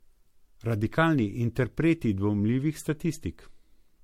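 Throughout, the speech sounds swirly, hollow and smeared, with blurred attacks and nothing above 16.6 kHz: generation loss, likely from about four successive MP3 encodes near 64 kbit/s.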